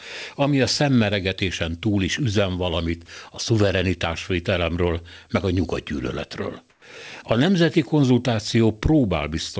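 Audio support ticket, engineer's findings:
Comfort noise in place of the background, 6.70–6.82 s, after "szuverenitásvételemről meg a nyugatgyűlöletről". 120 ms of flat, featureless hiss replaces the room sound. Drops about 5 dB. Likely cause: sender's voice detector paused transmission, receiver filled the gap with synthetic noise. Background sits about 39 dB below loud passages. Whole clip band-limited, nothing above 8 kHz, consistent with a G.722 call codec.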